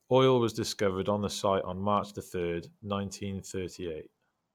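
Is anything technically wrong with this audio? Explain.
No, nothing technically wrong can be heard here.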